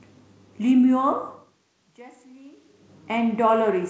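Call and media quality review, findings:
No faults found in this speech recording.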